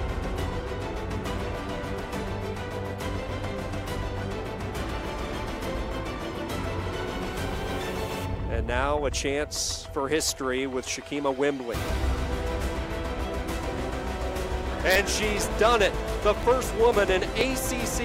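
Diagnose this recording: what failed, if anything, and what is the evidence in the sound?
From 14.96 s to 17.90 s the sound is broken by a regular train of small ticks, about seven of them, spaced every 0.49 s and audible only because signal is present. These are periodic USB or driver dropouts at the driver or buffer stage: something blocks the USB bus or audio driver on a fixed schedule, and each time roughly 10 ms of audio is skipped rather than filled, so the waveform jumps and clicks.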